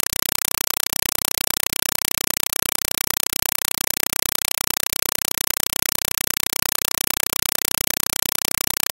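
Speech should be here, but from start to finish it is replaced by very loud, chattering static: short bursts of noise about 4.0 ms long, each followed by silence, repeating 31.25 times a second. This is a compressed stream played as audio. An AC-3 (Dolby Digital) bitstream, consistent with 192 kbps, has been treated as ordinary samples instead of being decoded, so each coded frame plays as a noise burst and its zero padding as silence.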